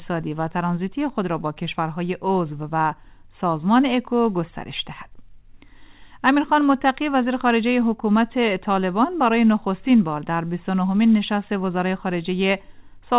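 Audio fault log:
No faults are heard anywhere in this clip. It came through a WebRTC call path whose content stops at 4 kHz, which fits a G.711 mu-law codec at 64 kbps.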